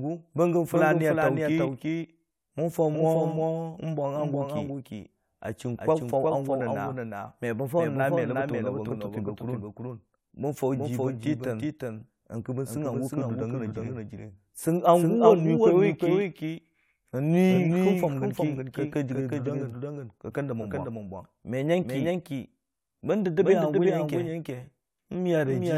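Speech, with a doubled audio track throughout: a second full-band copy trails the original by roughly 400 ms, about 5 dB quieter, with no decay or room colour, giving a dry slapback. The likely cause is the signal being picked up again through a slower path or an edit leaving two copies offset. At 17.54 to 17.57 s there are repeated frames: a 23.2 ms stretch plays twice, heard as a brief stutter. This fits a single compressed frame being duplicated, and it lengthens the audio by 23.2 ms.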